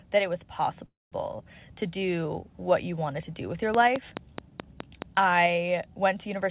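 Speech heard through a call path with nothing above 4 kHz, consistent with G.711 mu-law. A call audio freeze occurs from 0.86 to 1.14 s, right after "that it was". The sound stretches for about 256 ms, with roughly 200 ms of silence. Nothing is lost, and speech resumes late. Delayed packets likely emptied the jitter buffer. A train of clicks runs from 3.75 to 5.03 s, starting after "to do with your". About seven evenly spaced clicks arrive at 4.7 per second, roughly 20 dB above the speech. Likely cause is nearby interference or a faulty connection or power supply.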